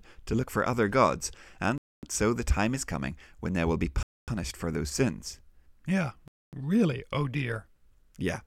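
At 1.78 to 2.03 s, just after "look for other gods", the speech stops dead until "so the time is". The same gap between chunks returns at 4.03 to 4.28 s, between "when they will be" and "for those sins", and at 6.28 to 6.53 s before "really oh dear". Each 250 ms hole follows 2.0 s of sound, so nothing is lost but every join is delayed. On a waveform these are flat lines with abrupt edges, and on a spectrogram they are blank vertical bands.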